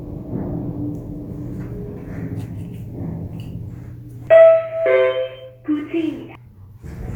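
Brief blips at 0.40 s, 4.27 s and 6.35 s mark damaged data in a compressed stream. Corrupt frames throw the decoder out of sync, so playback briefly glitches.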